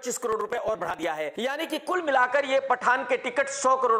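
Processor overload crackle runs from 0.33 to 1.03 s. The processor repeatedly failed to finish its small audio buffers on time. The late blocks were skipped rather than held, leaving a string of hard-edged gaps, roughly twenty of them, which fits buffers of around 10 ms. Together they sound like crackling, tearing grit laid over the sound until the load eases.

From 1.94 s to the end, the audio loses everything above 9.3 kHz, shifts in level by about 5 dB and takes on a new noise floor about 35 dB below the signal, with no silence at the change. The likely cause is the input switching to a poorer device with a narrower band and its own noise.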